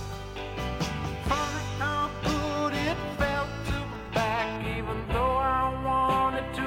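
From 4.56 s to the end, channel delay (comb filtering) sets in. One channel lags by roughly a tenth of a millisecond, so the mono sum cancels around 5 kHz. The top turns hollow and dull, and a spectrogram shows a fixed dark notch band there.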